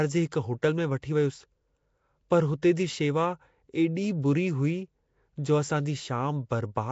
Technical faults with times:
0.00-6.91 Nellymoser compression
1.02 pre-echo

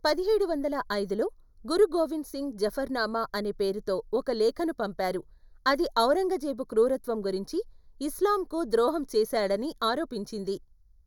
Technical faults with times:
0.00-11.06 channel delay (comb filtering)

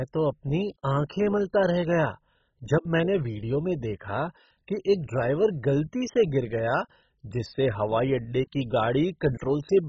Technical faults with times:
0.00-9.88 MP2 compression

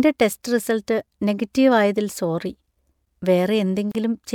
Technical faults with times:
3.92-3.95 gap at a join of encoded pieces

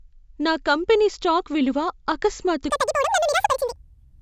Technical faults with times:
2.70-4.22 wrong sample rate

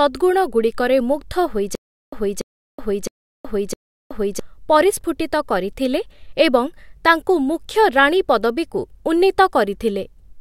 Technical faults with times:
1.75-4.39 stutter with silent gaps

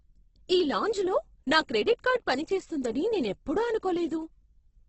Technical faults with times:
0.00-4.88 Opus compression

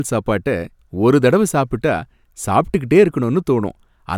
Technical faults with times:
none

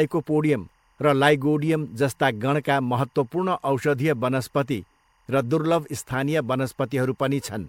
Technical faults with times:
0.00-7.68 timecode bleed

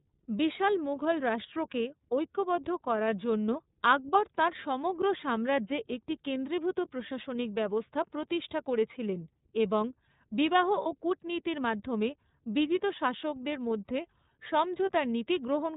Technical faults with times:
0.00-15.76 iLBC codec
10.82-10.86 lost iLBC frames

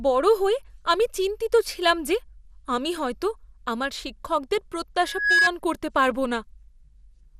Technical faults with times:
0.00-7.40 MP2 compression
5.05-5.50 loudspeaker feedback squeal

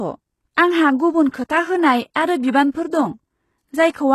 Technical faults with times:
0.00-4.15 HE-AAC compression

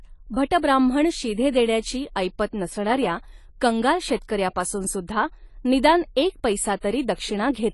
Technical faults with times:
0.00-7.74 AAC compression

